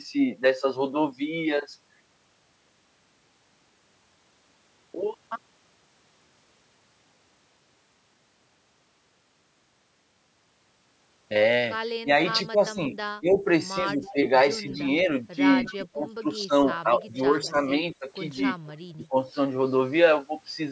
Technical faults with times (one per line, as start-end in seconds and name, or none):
12.02-19.15 speech suppressed in double talk
14.04-15.87 echo leak
17.43-19.06 echo leak